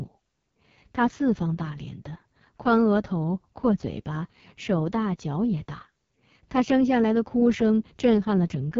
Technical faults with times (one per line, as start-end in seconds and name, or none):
0.00-8.79 AMR wideband (HD Voice) codec